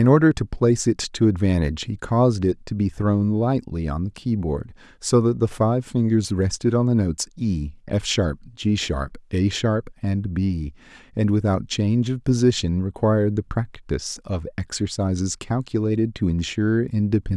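Speech runs through the clip, with a single DC step at 8.99 s. At that instant the waveform's zero line jumps by about -35 dBFS. It is heard as a brief low thump. The speech carries on unaffected. The offset then dies away rather than holding, which fits a high-pass stage near 20 Hz in the chain draining it off. A converter recalibrating, or an offset input being switched in, would cause this.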